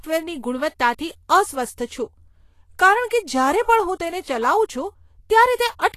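Throughout the speech, the treble is hissy and grainy, with roughened consonants and smeared attacks, likely Vorbis compression at a low setting, fitting roughly 35 kbps. Coarsely quantised high bands turn detail into noise-like texture, and a spectrogram shows nothing above 14.2 kHz.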